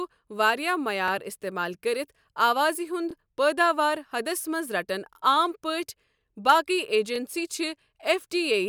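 At 1.08 to 1.11 s the speech stutters just before "استعمال کٔرِتھ". This is overlapping chunks. The audio was handled in pieces about 2 s long, and each new piece began slightly before the previous one ended. So a 25 ms slice plays twice at every join. It recurs at 3.11 to 3.13 s, before "پٲداوار حدس منز رٹن", then at 5.13 to 5.16 s, just after that phrase, and at 7.16 to 7.18 s. Each join is a brief click or stutter on a steady 2 s rhythm.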